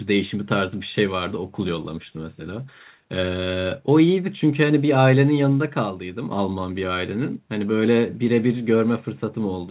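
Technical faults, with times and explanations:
No technical faults heard.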